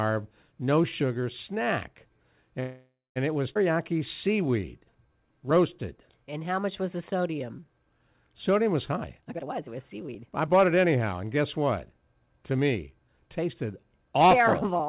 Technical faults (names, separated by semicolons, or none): call audio freeze; skip ahead; jitter buffer slow-down; jitter buffer speed-up